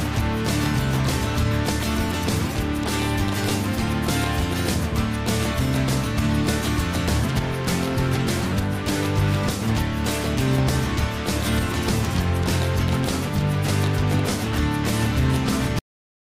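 At 15.79 s the audio has a cut-off end: the sound stops abruptly mid-event and drops straight to digital silence with no decay. The final buffers were never written or played out, leaving about 0.44 s of dead silence before the file ends.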